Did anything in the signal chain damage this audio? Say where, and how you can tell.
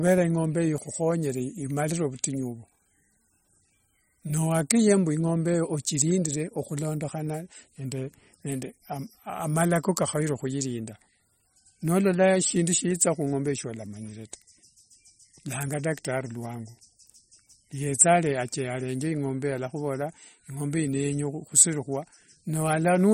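Yes. The codec stage has damaged this speech across the whole clip, most likely through MP3 compression at a low bitrate, roughly what a 34 kbps stream would produce. The encoder ran short of bits, so weak frequency lines drop in and out from frame to frame, giving a plainly audible watery, swirling texture and metallic chirps on s sounds. A spectrogram shows nothing above 16.5 kHz and speckled, flickering holes in the upper bands.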